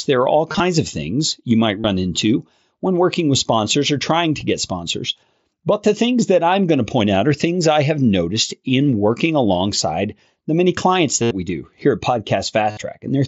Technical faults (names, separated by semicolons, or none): concealed Bluetooth headset packet loss